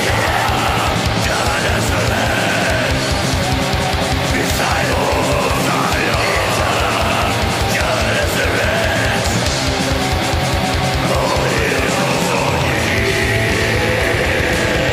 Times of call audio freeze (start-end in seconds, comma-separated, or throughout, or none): none